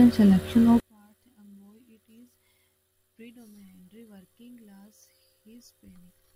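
From 0.80 s to the end, the speech drops by about 37 dB to a faint residue. The likely cause is one channel inverted: reversed polarity on one side cancels the shared centre in mono. Unlike a dropout, a trace of sound persists.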